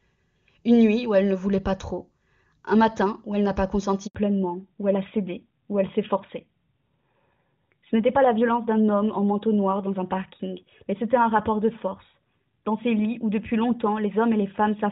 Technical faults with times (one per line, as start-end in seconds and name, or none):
4.07-4.15 handover gap
4.15-14.92 fallback to narrowband